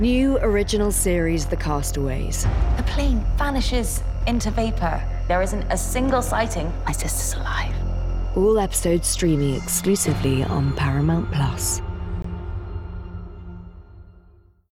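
At 12.22 to 12.24 s a gap at a join of encoded pieces opens: a gap of about 21 ms where two separately encoded segments meet, their encoder start delay and final-frame padding left untrimmed. The edges are smeared by the codec, and unlike a dropout, the sound resumes exactly where it stopped, with nothing skipped.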